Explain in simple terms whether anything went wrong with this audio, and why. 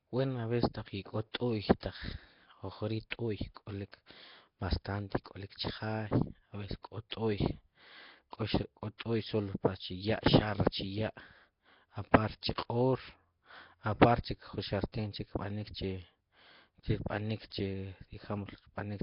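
The speech was likely squeezed through Nellymoser compression, an old Flash-era codec, leaving heavy damage: a rough, hissy, smeared sound with nothing above 5.3 kHz.

At 3.10 s the codec spread its noise ahead of a sudden sound, causing pre-echo: a 17 ms hiss just before the attack, which sounds soft or smeared.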